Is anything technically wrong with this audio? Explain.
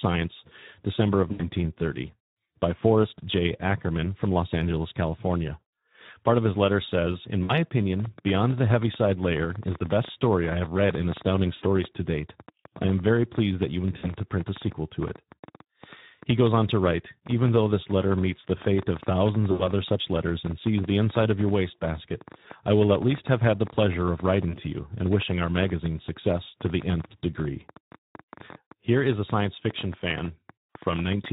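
Yes. The whole clip carries Speex codec damage. Its hoarse, noisy speech fits a low-quality setting of about 11 kbps. At that rate the CELP excitation has too few bits to carry the voice's fine detail, so the damage is plainly audible throughout.

There is also VoIP packet loss concealed by the speech codec at 1.32–1.50, 7.43–7.53, 11.55–11.64, 13.97–14.12, 19.51–19.67 and 24.51–24.58 s. The gaps last 20 to 80 ms. During each one the decoder stretches its last pitch and filter into a buzzy tone or coloured noise that fades. The speech then stays weak or distorted briefly while the decoder recovers.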